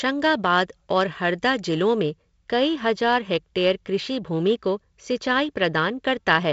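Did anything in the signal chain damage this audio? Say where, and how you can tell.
Yes. The damage is pre-emphasis left on, from 0.0 to 2.0 s. The treble there sounds thin, bright and hissy on sibilants. The tilt matches a 50 µs FM curve, about 11 dB up at 10 kHz relative to 1 kHz. Someone boosted the highs before a transmission or recording stage, and the matching de-emphasis on the receive side never ran. The G.722 wideband coding, which stops near 7.8 kHz, carries that tilt through.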